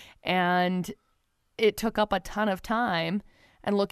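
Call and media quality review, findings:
No audible faults found; nothing to action.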